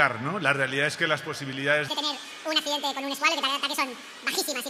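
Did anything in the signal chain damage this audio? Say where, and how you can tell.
Yes: the audio is read two samples at a time (double speed) from 1.88 s to the end, a sample-format or channel-count mismatch. It plays twice as fast and 12 semitones higher. A spectrogram shows features compressed in time and harmonic spacing doubled.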